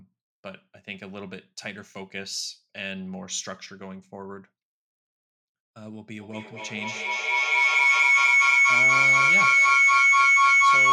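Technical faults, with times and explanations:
6.19–10.92 s: feedback howl. A loop from microphone to loudspeaker and back gains level on every pass, so the repeats grow instead of fading. They narrow to a piercing tone around 2 kHz, fed by a loop that repeats about every fifth of a second, and it peaks about 16 dB above the speech until the clip ends.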